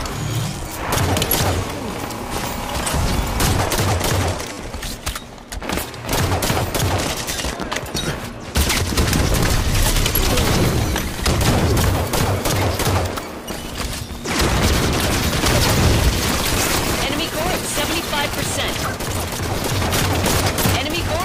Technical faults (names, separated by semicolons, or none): repeated buffer